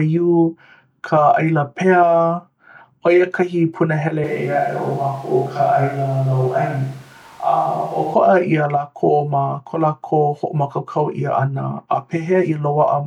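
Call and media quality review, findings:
Switch to a distant microphone, 4.24 s to 8.14 s. Close mic signal likely dropped, with capture falling back to a far pickup such as a camera mic. Voice abruptly roomy and hollow, thinner low end, no real level change, room noise about 30 dB below speech. Sudden cut in and back.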